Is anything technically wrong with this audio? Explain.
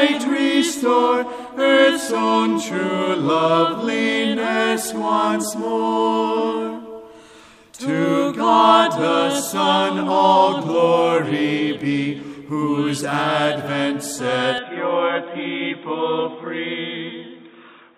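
Yes. From 14.58 s to the end, the sound abruptly turns dull and boxy. Nothing above 3.8 kHz survives, the level drops by about 5 dB, and a new background noise appears, roughly 40 dB below the signal. There is no gap at the change. The likely cause is that the input switched to a poorer device, such as a headset's call profile. A simple filter would only remove treble. Here the level and noise floor also change together, which points to a different microphone path.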